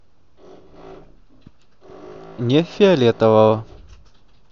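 Speech recording with no technical faults to report.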